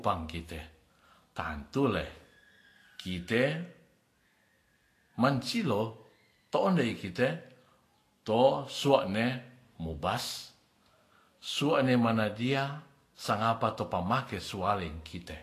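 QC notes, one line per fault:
Throughout: Vorbis compression, likely at a low bitrate near 35 kbps. Nothing remains above 14.2 kHz, and the coarsely quantised treble in the speech turns to grainy hiss. The spectrogram shows a hard ceiling at 14.2 kHz and speckled, noise-like texture below it.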